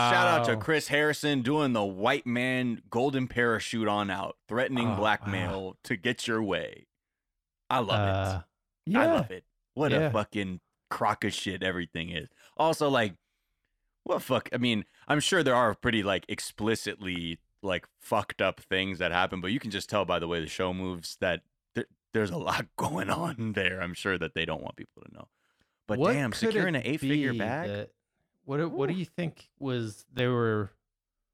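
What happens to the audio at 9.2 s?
At 9.18 s the program likely failed to fill its output buffer in time, leaving a block of digital silence about 5.3 ms long, which fits a 256-sample buffer. The speech drops abruptly to silence and returns with no fade, heard as a tick or dip.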